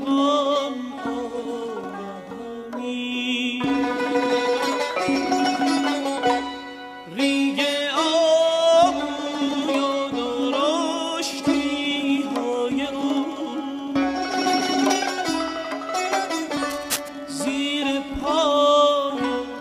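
Right near the end, from 16.64 to 17.09 s, there's a burst of cable scratch noise: about half a second of dense, ragged scratching sitting fairly loud over the sound. It's likely a worn lead or connector getting nudged, with the contact flickering as it moved.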